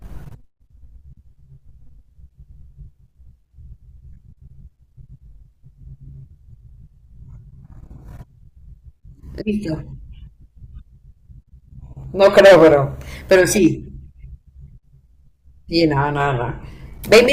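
Hard clipping hits the speech three times: 12.23 to 12.74 s, 13.32 to 13.67 s, and 17.12 to 17.31 s. The level exceeds what a stage can pass by about 14, 6 and 10 dB respectively, so peaks are sheared flat, adding high harmonics heard as harsh fuzz, strongest in the first burst.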